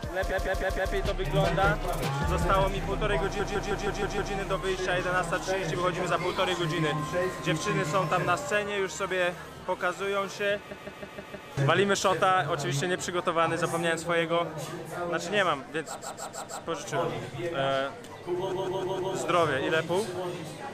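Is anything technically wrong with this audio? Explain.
Yes. Repeated frames occur at 0.30–0.93 s, 3.39–4.33 s, 10.70–11.48 s, 16.00–16.63 s and 18.51–19.14 s. A block of about 157 ms of compressed audio was written more than once, so the decoder replays it four, six, five, four and four extra times. Each repeat is heard as a stutter that lengthens the audio.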